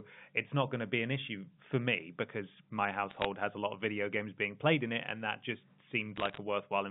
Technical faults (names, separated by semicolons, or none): bit errors on a digital phone line